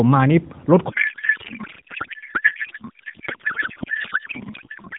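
From 0.90 s to the end of the speech, the audio collapses into garbled noise and warble that barely tracks the talker. This is a codec payload misread: the AMR frames were packed octet-aligned but decoded as bandwidth-efficient, so every field lands in the wrong place and the decoder synthesises nonsense from valid-looking frames. Before that, the AMR narrowband path sounds as expected, band-limited below 4 kHz with only light coding texture, consistent with about 12.2 kbps.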